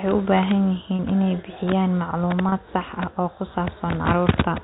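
At 0.97 s and again at 2.49 s, the speech briefly holds a slightly buzzy tone. This is packet loss with pitch repetition. About 30 ms goes missing each time, which fits a single lost packet. The receiver fills each gap by repeating the last pitch period. Both gaps pass over the band-limited G.711 telephone sound.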